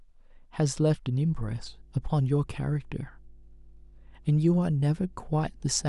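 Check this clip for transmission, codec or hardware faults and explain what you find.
Mains hum enters at 1.27 s and continues to the end of the speech: a steady 50 Hz tone with low harmonics, sitting about 25 dB below the signal. A ground loop or nearby transformer is coupling the power line into the audio path.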